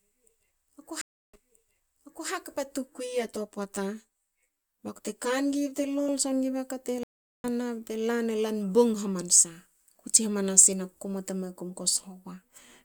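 A stream reconnect at 1.01 to 2.29 s breaks the speech with a silence of 320 ms. The link dropped, the player went quiet and then restarted its decoder mid-stream. The server resent a burst on rejoining, so playback picks up 960 ms earlier and repeats nearly a second of speech.

Channel delay with comb filtering runs from 2.90 to 6.09 s. One channel lags the other by around 10 ms, and the two are summed to mono. Content shared by both channels cancels at evenly spaced frequencies, with the first notch near 50 Hz and further notches at regular intervals above it. The fixed notches make the speech sound hollow and phasey.

A second stream reconnect occurs at 7.03 to 7.46 s, with a silence of 407 ms. This time the decoder rejoins the live stream about a third of a second further on, so a short stretch of speech is skipped.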